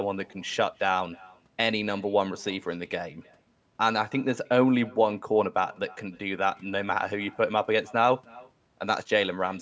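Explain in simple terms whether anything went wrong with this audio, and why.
Yes, something went wrong: there is an echo with no canceller running through the whole speech clip. The far end's loudspeaker fed the speech back into its microphone, so every phrase returns about a third of a second later as a faint, thin copy.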